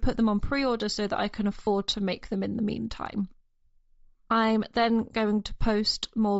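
A speech clip. Throughout, the upper spectrum sounds thin and grainy, with noisy fill and a breathy edge. This is likely Bluetooth LC3 compression, and the damage fits a low bitrate around 32 kbps. From 1.65 to 1.67 s, between "so that I can" and "to make them in", lost LE Audio frames leave a brief noisy smear. The decoder repeated the last spectrum with scrambled signs. The gap fits three lost 7.5 ms frames.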